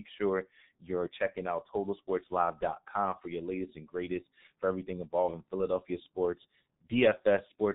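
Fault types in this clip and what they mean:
G.723.1 codec: an early low-rate telephony codec that models the voice in 30 ms frames, and the heavy damage throughout this speech points to its roughly 6.3 kbit/s mode. Nothing survives above 4 kHz, so the voice sounds muffled and hoarse and consonants blur together. On a spectrogram the energy stops at a hard 4 kHz ceiling, with smeared, blocky harmonics that change in coarse steps rather than gliding smoothly.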